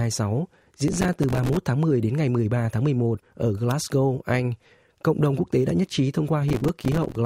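Speech carrying processor overload crackle from 0.88 to 1.57 s and again from 6.48 to 7.16 s, just after "tế đã nhất trí". Dozens of missed buffer deadlines, each leaving a tiny silent gap that fits buffers of a few milliseconds, make a gritty tearing rather than one clean dropout.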